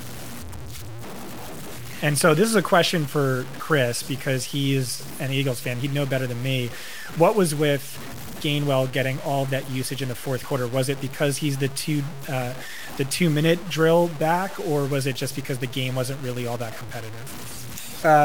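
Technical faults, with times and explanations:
Throughout, low bit depth without dither: the speech carries a coarse, grainy distortion that tracks each syllable, with quiet tails sputtering or dropping out. This likely comes from truncation to about 6 bits, leaving error roughly 15 dB below the signal.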